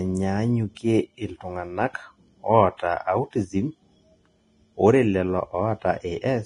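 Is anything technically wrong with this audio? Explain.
Yes, there are two faults, one running through the whole speech clip and one short event.

Throughout, the audio shows heavy lossy-codec damage, most likely Vorbis compression. Nothing remains above about 10.6 kHz. Below that, the encoder quantised the high-frequency residue so coarsely that fine detail was replaced by noise of similar energy. The result is a hissy, grainy texture, roughened tonal parts and softened consonant attacks. The damage fits a low bitrate of roughly 29 kbps.

At 0.75 s there is pre-echo spreading about 19 ms ahead of a sharp onset. The transform block holding that attack spread its quantisation noise evenly across its full length, so noise sized for the loud onset also filled the quiet moment just before it. This is heard as a brief hiss leading into the attack, which itself sounds smeared and less crisp.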